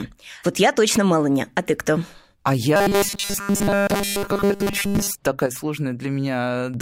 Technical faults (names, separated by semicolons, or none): robotic sound from repeated short buffers; sudden gain jump